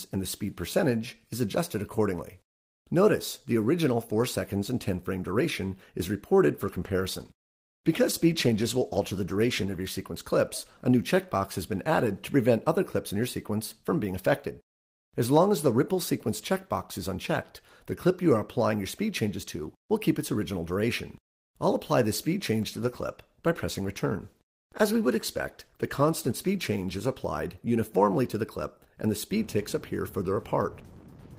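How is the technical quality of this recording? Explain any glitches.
Quality is hurt by two call bitrate drops, at 6.69 to 10.57 s and at 22.70 to 28.07 s. The call's bandwidth estimate fell and the encoder was pushed to spend far fewer bits, which in this audio fits a fall from about 32 to 15 and 16 kbps. The coarser coding holds at its worst for about 3.1 s and 3.6 s, making the sound rough and watery. In the first drop the top end is also cut from 20 kHz to 12 kHz, dulling the sound until it recovers.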